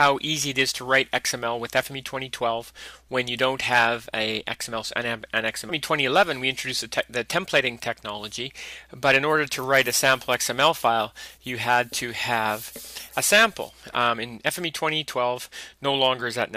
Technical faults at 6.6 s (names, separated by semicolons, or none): none